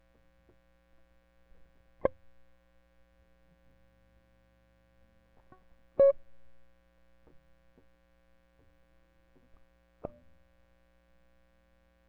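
No technical faults can be heard anywhere in this music.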